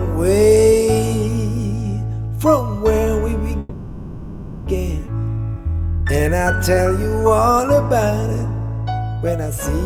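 From 3.59 to 4.68 s there's a call audio freeze: the last sound gets stretched into a fading buzz for about 1.07 s, likely because packets stalled and the jitter buffer ran dry. Playback then resumes where it left off, with nothing lost. At 5.06 to 5.09 s it skips ahead, jumping over roughly 0.7 s of audio almost seamlessly as the buffer sheds the backlog. Then there's jitter buffer slow-down from 5.38 to 6.01 s at 93% speed, adding 50 ms, and from 7.03 to 7.63 s at 95%, adding 36 ms. Repeated pitch periods drag the sound out at unchanged pitch while the buffer rebuilds.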